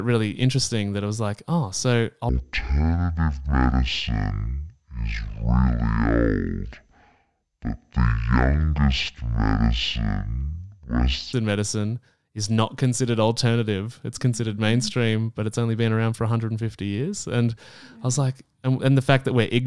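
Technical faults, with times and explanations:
2.29 to 11.33 s: wrong sample rate. After "was like oh so", the audio plays at half speed, an octave lower, since 48 kHz audio is running at 24 kHz. It comes right by "medicine is not considered".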